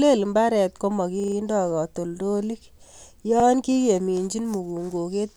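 Twice, fresh audio failed to reach the playback device in time, so it replayed its last buffer, a repeated buffer. After "lel mbaret" at 1.2 s, a 40 ms slice stutters four extra times with hard joins until 1.36 s; at 3.4 s, one repeat gives a brief hiccup.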